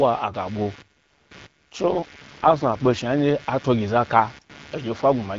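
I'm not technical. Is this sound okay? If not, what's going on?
No. Two things are wrong.

First, there is computer activity noise all the way through. A faint buzz rides under the speech, pulsing quickly, around 150 times a second. It comes from the computer's own work disturbing the audio wiring, not from the speech itself.

Second, there is an AMR rate drop from about 1.84 to 2.98 seconds. The phone network briefly lowered the call quality, likely because of a weak signal. The speech sounds rougher and more robotic there, then clears up when full HD Voice quality returns.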